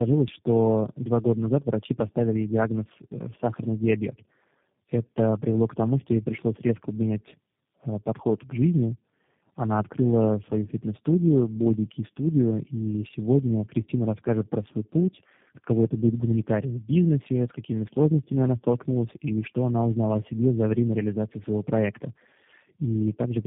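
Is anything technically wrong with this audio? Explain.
Yes. Tandem speech coding runs throughout: the speech passed through three low-rate speech codecs in a row, each re-encoding the previous one's degraded output. The result is rough, muffled and warbly, with nothing above 3.6 kHz. This fits a chain such as G.729A into AMR-NB and back into G.729A.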